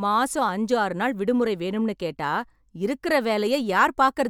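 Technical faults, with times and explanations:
No technical faults can be heard in this speech clip.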